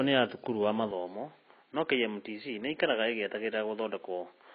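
Throughout, the speech carries heavy codec damage, likely from AAC compression at a rate that fits about 16 kbps. A spectrogram shows nothing above 5.5 kHz, with a dull, smeared sound.

At 0.91 s the input likely switched to a poorer device. The spectrogram's upper edge drops to 4.4 kHz and a new noise floor appears about 45 dB below the speech. The waveform shows no gap and no level step.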